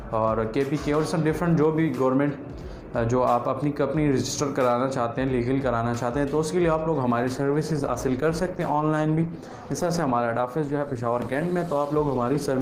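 At 7.23 s the quality falls abruptly and stays down until the end at 12.62 s. This is an adaptive stream at a lower bitrate: the player switched to a leaner encoding, one that fits a step from roughly 64 to 16 kbit/s Opus. Codec artefacts rise. From that point the waveform runs on without any gap.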